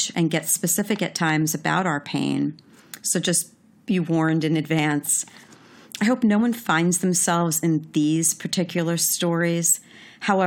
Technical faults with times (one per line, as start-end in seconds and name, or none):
0.17-10.41 periodic USB or driver dropouts